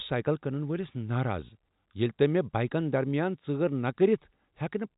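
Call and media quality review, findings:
Nothing stood out on listening to this speech clip, which carries the expected narrowband character of G.711 telephone coding.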